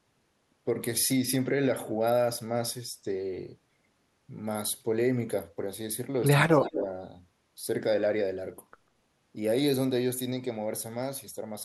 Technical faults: speech suppressed in double talk; echo leak

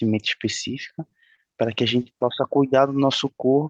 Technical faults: scattered short gaps; jitter buffer slow-down

